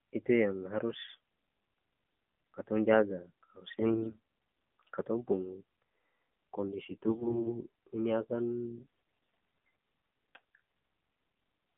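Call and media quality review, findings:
AMR narrowband mobile codec, whole clip: band squeezed to roughly 150 Hz–3.5 kHz, nothing up top. The voice sounds buzzy and synthetic, with the coarse pulse-driven vocal-tract model plainly audible. That thin, processed character fits a low AMR-NB mode, around 7.4 kbps. Classic narrowband mobile leg, so worth checking whether the call dropped to 2G/3G.

AMR bit errors, 3.72–4.20 s: hoarse, scratchy, gargly patch. Pitch and level hold. Weak-link bit flips in unprotected class bits misplace the excitation pulses. About 24 frames' worth.

AMR bit errors, 7.08–7.52 s, just before "ini akan": same gargle. Roughly a tenth of the less-protected bits look flipped while the checksum over the important bits still passes.

AMR bit errors, 8.78–9.68 s, right after "ini akan": the longest hit, same hoarse gargle. It fits about 50 frames with a bit lower error density.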